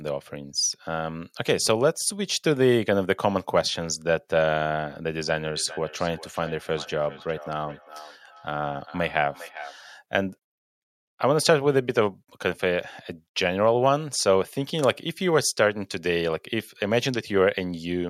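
From 5.27 to 9.76 s, feedback echo between two devices: a second device's output re-enters the microphone, returning the speech about every 0.4 s, thinning, peaking about 19 dB below it.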